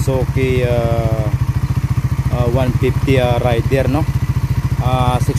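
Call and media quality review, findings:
No faults found: no dropouts, level breaks, distortion or timing disturbances anywhere in the signal path.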